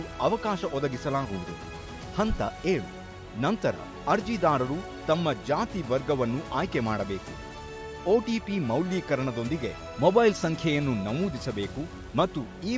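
No technical faults can be heard anywhere in the clip. No working path stands out from the audio beyond that.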